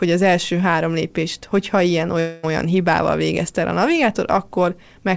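From 2.20 to 2.45 s the speech breaks off, likely a long network dropout. The receiver stretches the last sound into a buzzy, fading tone for about a quarter second. Speech then resumes with that stretch lost. On a spectrogram this looks like smeared, repeating harmonics that dim without ever reaching true silence, and, as across the whole G.722 call path, nothing above 8 kHz.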